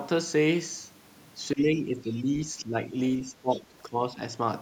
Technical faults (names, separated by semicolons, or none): speech suppressed in double talk; other side's voice leaking through